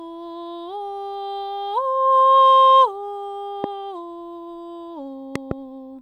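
Loud pops hit at 3.64–3.66 s and, doubled, at 5.36–5.53 s, jumping well above the music. They are likely voltage pulses from a plug or switch.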